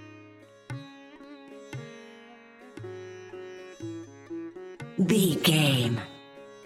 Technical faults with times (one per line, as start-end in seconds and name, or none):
none